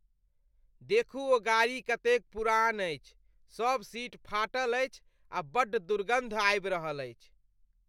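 No technical faults can be heard anywhere in the recording; the signal stays steady and intact throughout.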